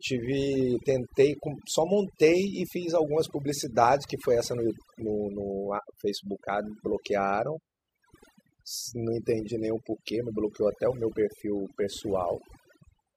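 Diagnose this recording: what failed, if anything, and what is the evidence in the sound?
What failed is overdone noise removal, and it's there for the whole speech clip. The gaps between phrases drop to near silence with little twinkling specks left behind. That points to the processing stage: a noise reducer pushed too hard, pulling individual frequency bands way down whenever they sit close to its noise estimate, so the quieter parts of the voice get stripped out along with the noise.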